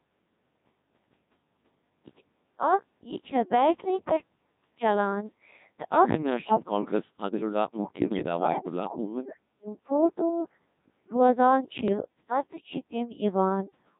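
Throughout, the speech passes through the Codec 2 vocoder at 1.6 kbit/s, which rebuilds it from pitch, voicing, energy and envelope alone, leaving a heavily robotic, buzzy voice. Bit errors on digital voice radio, with a few percent of bits flipped, corrupt frame parameters from 8.04 to 8.22 s and 11.88 to 12.02 s, causing sudden warbling jumps in pitch and level.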